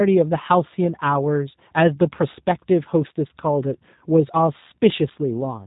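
G.729 codec coding, heard throughout this speech clip, leaves it plainly rough and synthetic, consistent with 8 kbit/s G.729A. Each 10 ms frame is rebuilt from a vocal tract filter, a pitch predictor and a few pulses, and nothing above 3.8 kHz survives.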